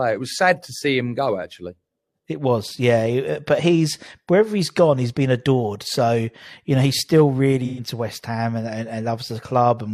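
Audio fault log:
7.65–7.81 s, AAC frame loss with concealment: right after "you know he's still" there's a short smeared, noisy, phasey patch. About 128 ms of coded audio went missing, which fits roughly three dropped frames, and the decoder papered over the hole by reusing the last good spectrum with its phase jumbled. That keeps the energy going, so you don't get a dropout, but the detail turns to mush for that moment.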